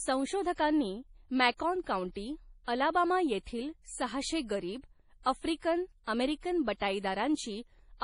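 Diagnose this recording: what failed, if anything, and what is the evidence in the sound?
The fault is at the codec stage. Throughout the 8-second speech clip, everything above 10.5 kHz is missing, and the remaining sound is watery and swirling, with metallic s sounds. The damage is heavy, which fits MP3 compression at a low bitrate of around 32 kbps, likely the cause here. The encoder runs short of bits, so it cuts the treble at a fixed point and zeroes weak frequency lines that flicker on and off between frames. A plain low-pass filter or reduced sample rate would remove the top just as cleanly but would leave no swirl.

Pre-echo appears from 1.57 to 1.60 s as about 30 ms of hiss just before a sharp attack, and that attack sounds softened. This is also a codec effect. The coder spreads quantisation noise evenly across a whole block, so noise sized for the loud onset also fills the quiet moment before it. 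A click or network glitch would land at an arbitrary moment. This hiss sits only immediately ahead of the attack and is shaped by it, which marks it as pre-echo.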